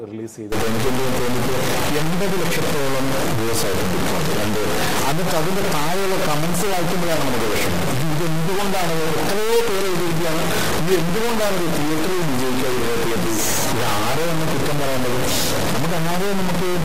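The audio was likely truncated to about 3 bits without dither, a low bit depth fault. From 0.52 s to the end it turns grainy, with distortion about 5 dB louder than the sound.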